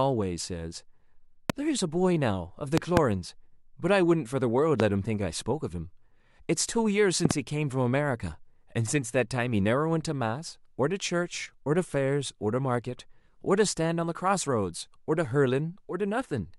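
Loud pops, sharp thumps well above the speech, at 1.50–1.52, 2.78–2.99 (double), 4.80–4.82 and 7.25–7.33 s (double), likely from electrical voltage spikes.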